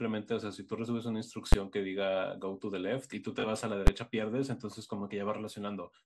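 Speech with a dull, gurgling, granular texture throughout, likely MP2 compression at a low bitrate around 80 kbps, with upper sub-bands switching off and the remaining bands coarsely quantised. Two loud bangs at 1.53 s and 3.87 s are invalid numbers at full scale: each roughly 11 ms block, consistent with 512 samples, is pinned at one extreme value.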